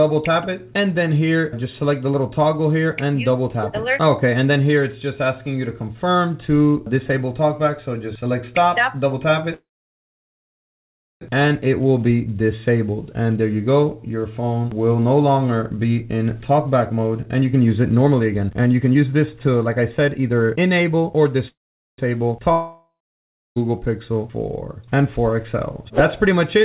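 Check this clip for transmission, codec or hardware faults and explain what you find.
There are four faults here, of three kinds, all on a call path that sounds like G.711 A-law with nothing above 4 kHz.

Call audio freeze, at 9.54 to 11.23 s and again at 21.48 to 22.00 s. The sound smears into a fading buzz, then goes quiet for about 1.6 s and 0.45 s respectively. The likely cause is packets stalling in transit until the jitter buffer ran dry. When the audio resumes it picks up exactly where it stopped, so nothing is lost, just shifted later.

Jitter buffer speed-up, from 15.70 to 21.47 s. The buffer had built up too much delay, so the receiver kept snipping out tiny pitch-period slices, roughly 0.7 s in total. Playback runs at about 111% with the pitch unchanged, giving a hurried, rushed feel.

Long network dropout, from 22.52 to 23.58 s. About 1.04 s of audio never arrived. You hear a short fading buzz, then around 0.65 s of silence, and the sound returns further along, most likely with that chunk simply gone rather than delayed.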